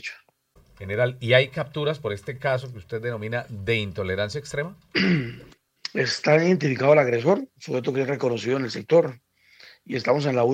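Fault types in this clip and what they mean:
Dropped samples: a single sharp click at 0.94 s, likely a few samples, roughly a tenth of a millisecond, missing, so the waveform jumps abruptly.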